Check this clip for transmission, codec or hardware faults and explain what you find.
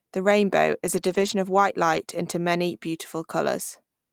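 Two stretches of lost packets rebuilt from error correction. From 0.85 to 1.31 s, just before "of white", and from 1.93 to 1.95 s, between "of white" and "into many". Later packets carried low-bitrate backup copies, so nothing drops out. Those frames sound rougher and noisier.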